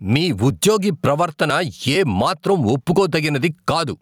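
A speech recording with gain pumping throughout: the gain swings by around 10 dB, likely from the input gain being set far too high while a fast limiter clamps every peak. On the waveform, peaks are flattened to a near-uniform ceiling, with loud and soft parts squashed closer in level.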